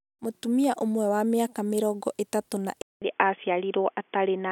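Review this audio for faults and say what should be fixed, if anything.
At 2.82 s, right after "mĩaka miĩrongo ĩtatũ na", the speech drops out for 200 ms and returns dull and boxy, with nothing above 3.4 kHz, through to the end of the clip. The level stays about the same, and a new, faint noise floor appears well below the speech. This points to an input switched to a poorer device, likely a headset's narrowband call profile taking over from the original microphone. Lock the recording input to a single device and disable automatic switching to headset call profiles during capture.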